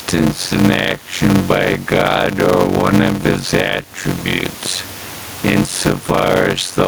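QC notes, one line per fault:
throughout: block size mismatch (padded). Short blocks are zero-filled to a longer length, causing a 91.9 Hz buzz and speech slowed to 0.533x at normal pitch, which fits 256-sample writes into 480-sample reads. The waveform shows evenly spaced flat gaps, and the spectrogram shows vertical stripes with harmonics of 91.9 Hz.
throughout: gain pumping. Room noise sits about 30 dB below the speech, and the gain swings around 15 dB, likely from excessive input gain with a fast limiter. The waveform envelope looks flattened.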